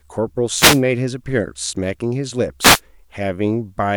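At 0.53 s a wireless microphone noise hit breaks in on the speech, a quick swish of static lasting until about 0.82 s, and a second one follows from 2.60 to 2.80 s. Both sound like an analogue FM radio link briefly losing signal: reflections cancel the carrier and receiver hiss rushes up for those few tenths of a second.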